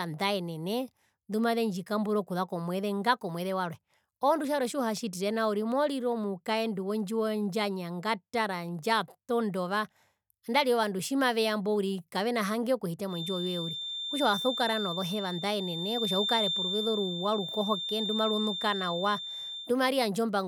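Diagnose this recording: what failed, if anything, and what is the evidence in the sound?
A feedback whistle sits at 3.6 kHz from 13.05 to 19.75 s, after "uriri kavena hange okuhita", just below the speech. Playback stage: likely loudspeaker-to-microphone gain held at feedback's edge.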